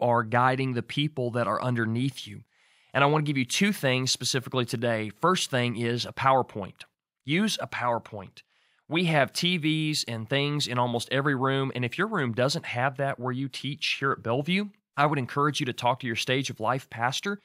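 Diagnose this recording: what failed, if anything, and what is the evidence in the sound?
Nothing failed here: no stage in the chain gives itself away, and there's simply no fault to point to anywhere in the recording.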